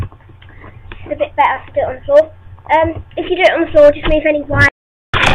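The receiver lost the digital broadcast signal or rejected corrupted frames and muted until clean frames returned, a digital broadcast dropout. The audio fades out within about 3 ms at 4.68 s and stays silent until 5.14 s, and roughly 450 ms of programme, about fourteen frames' worth, is lost.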